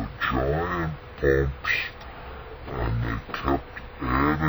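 Stereo read as mono runs from the very start to the end of the clip. The left and right samples of each stereo frame, which alternate in the data stream, have been taken as one continuous single channel, so every moment of the original is spread across twice as many samples. Played back that way, the sound runs at half speed (0.5×) and sits a full octave, 12 semitones, below where it should, heavy and dragging throughout.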